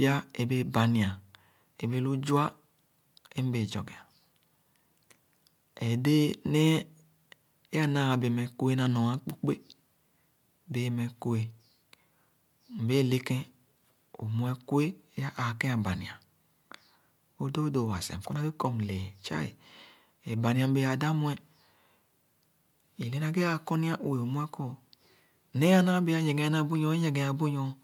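No technical faults can be heard anywhere in the speech. There is nothing to place in time or trace to a cause.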